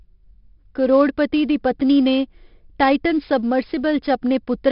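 Throughout the speech, 4-bit ADPCM compression adds a gritty hiss that rises and falls with loudness, and distortion on sharp attacks, with nothing above 5.3 kHz, consistent with a stream near 44 kbps. Unlike lossy-codec swirl, the noise is broadband and level-following rather than warbling.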